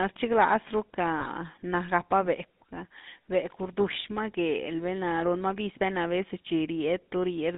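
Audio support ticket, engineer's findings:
GSM full-rate codec throughout. Speech coded with GSM full rate, consistent with 13 kbps: vocal-tract model driven by a regular pulse excitation, only every third excitation sample kept. Line band about 150 Hz to 3.6 kHz, nothing above. Plainly audible buzzy, gravelly roughness across all speech; thin, band-limited top end.

Lost GSM frames, 1.2 to 1.28 s. A single 20 ms frame dropped; decoder concealed it by repeating the last good frame's parameters. Heard as a brief rough, metallic ring where the speech should continue, then normal decoding resumes.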